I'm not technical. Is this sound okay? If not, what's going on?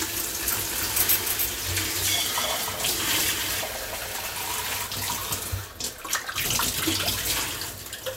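No. From 0.39 to 4.87 s, everything is heard twice: a quieter copy trails about a third of a second behind and cuts in and out abruptly. This doubled audio track likely comes from the same sound being recorded twice through a slower path.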